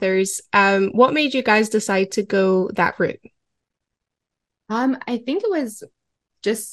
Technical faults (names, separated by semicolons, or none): MP2 compression; DAB burbling